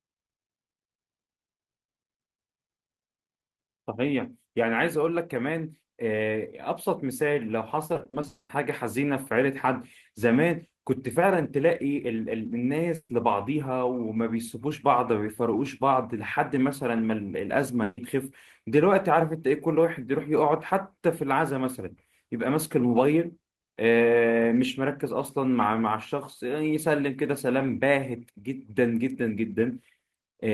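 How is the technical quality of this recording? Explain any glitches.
The recording is marred by network packet loss, clustered around 8 seconds with two shorter breaks later.

From 7.87 to 8.25 s, repeated packet loss (robotic sound) occurs: six separate gaps, the longest 40 ms, about 140 ms in all, were patched by extending the previous audio. Concealment fills 37% of that span, so the speech turns choppy.

Straight after, from 8.27 to 8.51 s, the speech gives way to a fading buzz or hiss and then about 90 ms of silence before resuming with 220 ms missing. This is likely a long network dropout, where the receiver stretched the last sound until it gave out.

At 12.95 to 13.11 s and 17.83 to 17.99 s, a burst of packet loss removed about 140 ms each time. The receiver held the last sound while lowering it, producing a brief buzz or hiss. The first trails into about 50 ms of silence, while the second runs straight back into speech.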